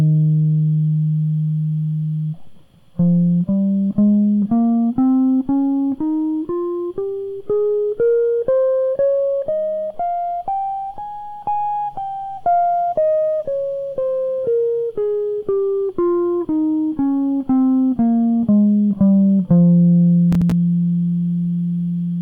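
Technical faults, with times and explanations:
20.32 to 20.52 s, processor overload crackle: a short, gritty tearing rides on the music for about 0.2 s, a quick run of clicks with hard-edged dropouts, then clears. The processor fell behind and missed the deadline for several audio buffers, each a few milliseconds long. Every missed buffer was filled with silence, so the music cuts out and back in abruptly at each one. Those sharp edges add up to crackle until the load eases.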